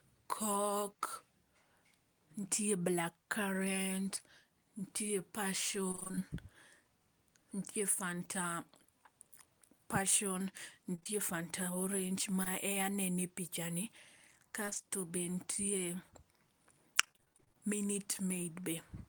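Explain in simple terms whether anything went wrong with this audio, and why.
Repeated packet loss (robotic sound) occurs at 5.91–6.22 s, 14.66–14.85 s and 17.01–17.58 s. Dozens of tiny holes were patched, leaving choppy speech with pieces missing.

Short concealed packet loss occurs at 10.95–11.07 s (three gaps in a row) and 12.43–12.48 s. These are single brief smears or wobbles, not a sustained robotic stretch.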